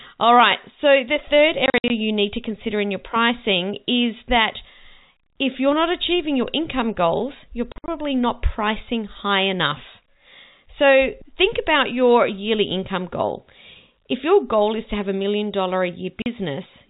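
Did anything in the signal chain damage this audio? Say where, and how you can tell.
Yes, at the network stage: packet loss filled with silence. Hard-edged dropouts hit at 1.66 to 1.9 s, 7.72 to 7.88 s and 16.22 to 16.26 s. Gaps run up to 60 ms and fit 20 ms packets. The receiver simply played zeros, while the G.711 telephone band itself comes through cleanly.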